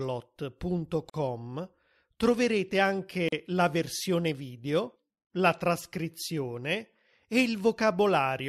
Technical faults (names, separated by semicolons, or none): gap at a join of encoded pieces